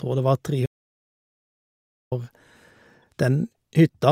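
Speech that cuts out at 0.66 s and returns at 2.12 s, an audio dropout to silence lasting about 1.45 s. The gap is silent with no room tone, most likely from the input link failing while recording continued. On a waveform it is a dead flat line, and on a spectrogram a fully black band. At 3.03 s a corrupt frame decoded gives a brief chirp-like blip: a single damaged frame's misread codes scatter energy at wrong frequencies, seen as a short, bright, out-of-place smear.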